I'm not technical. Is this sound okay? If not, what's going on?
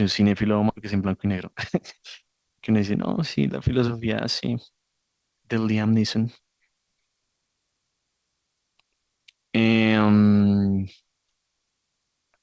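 No. At about 0.70 s the sound suddenly jumps forward, losing almost half a second. This is a skip ahead: a stretch of audio was dropped, either on the way or by the call's jitter buffer when it overflowed, and playback jumped to audio that was already waiting.

From 0.93 to 1.53 s the speech runs about 9% faster but keeps its normal pitch. This is a jitter buffer speed-up, where the receiver trims tiny slices to catch up.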